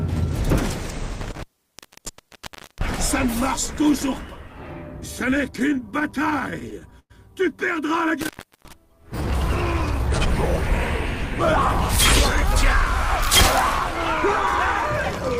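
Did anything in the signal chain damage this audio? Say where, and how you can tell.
Yes. Two stages left marks. In the analogue wiring there is an intermittent contact, a plug or cable briefly opening, at 1.21 to 2.97 s (open for about 1.36 s) and again at 8.21 to 8.73 s (open for about 0.36 s). The sound drops out or breaks up, with crackle at each edge and hiss while the line is open. On a waveform the envelope collapses abruptly with spiky edges. A spectrogram shows broadband vertical clicks framing a band of low-level noise.

Between 5.19 and 7.12 s, the network and jitter-buffer stage produced repeated stalls (stutter). Packets arrived late or too slowly, so the buffer ran dry 18 times. Each time the receiver stretched the last sound, fading it during longer waits. That filled about 282 ms in total, roughly 15% of the span, with the longest gap about 104 ms and nothing lost. The audio drags and stutters. 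A spectrogram shows smeared, repeated frames with fading tails.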